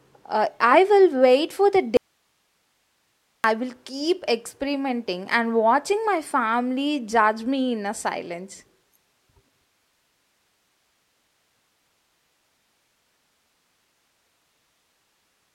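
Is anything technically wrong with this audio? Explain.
Yes. From 1.97 to 3.44 s, after "will wait for the", there is an audio dropout to a faint residue. The speech likely vanished upstream while the path stayed live. Only hiss, far below speech level, fills the gap until "will keep experimenting and".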